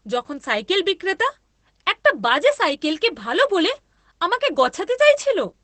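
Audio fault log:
Throughout, Opus voice compression: the speech sounds muffled, hoarse and faintly robotic, with nothing audible above about 8.6 kHz. The encoder is running its SILK linear-prediction coder in wideband mode, which cuts the band near 8 kHz and describes the excitation only coarsely. That loses the airy top end and roughens the voice's texture. The plainly audible damage fits a bitrate around 12 kbps.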